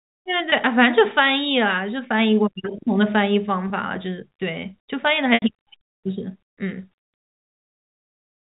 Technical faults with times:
0.50-0.52 packet loss with pitch repetition
3.68-3.70 packet loss with pitch repetition
5.34-5.42 packet loss with pitch repetition

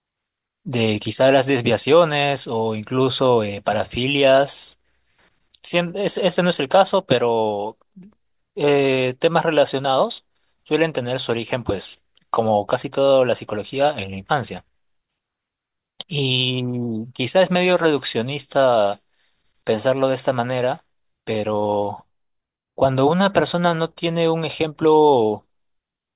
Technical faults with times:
none

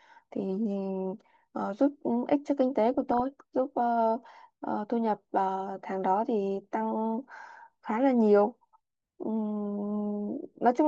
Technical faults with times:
2.94-3.20 DAB burbling
6.64-6.67 DAB burbling

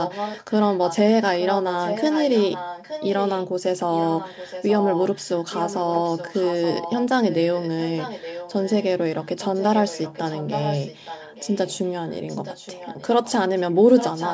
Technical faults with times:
0.02-0.97 echo leak
1.39-3.47 echo leak
3.96-8.85 echo leak
9.21-14.34 echo leak

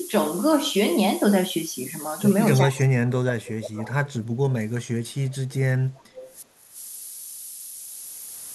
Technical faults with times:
0.00-8.54 low bit depth with noise shaping
2.62-6.76 speech suppressed in double talk
3.86-4.13 echo leak
5.09-5.54 echo leak
5.91-6.37 echo leak

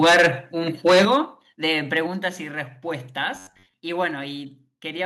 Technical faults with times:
0.02-0.28 microphone overload
0.05 microphone volume stepped down
0.86-1.17 microphone overload
1.05 microphone volume stepped down
2.07 microphone volume stepped down
3.35-3.74 robotic sound from repeated short buffers

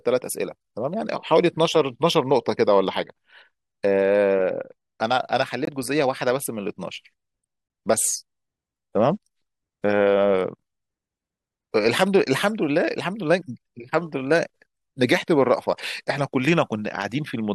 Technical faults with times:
5.65-5.69 corrupt frame muted
7.66-7.70 corrupt frame muted

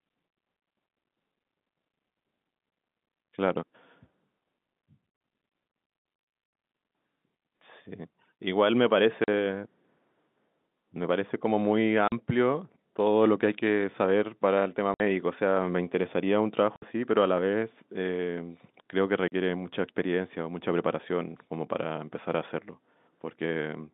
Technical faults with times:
5.16-5.20 packet loss filled with silence
9.24-9.28 packet loss filled with silence
12.08-12.12 packet loss filled with silence
14.94-15.00 packet loss filled with silence
16.76-16.82 packet loss filled with silence
19.28-19.32 packet loss filled with silence

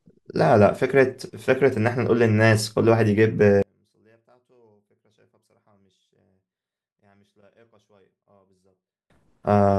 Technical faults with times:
3.62-9.10 one channel inverted

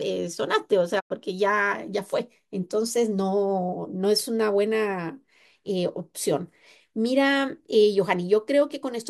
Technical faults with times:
0.99-1.12 digital broadcast dropout

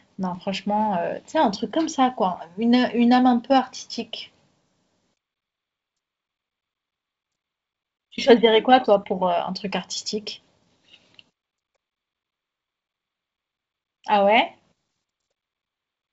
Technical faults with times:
2.35 block of digital silence
7.97-8.00 block of digital silence

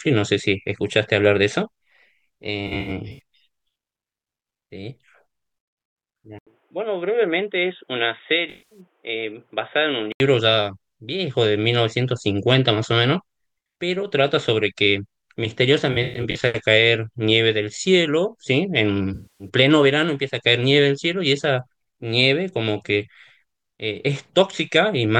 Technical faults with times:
2.67-3.19 AAC frame loss with concealment
6.39-10.20 input switched to a poorer device
8.50-8.80 AAC frame loss with concealment
15.92-16.44 AAC frame loss with concealment
19.14-19.48 AAC frame loss with concealment

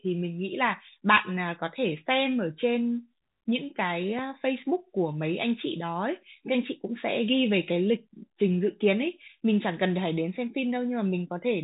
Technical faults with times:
none

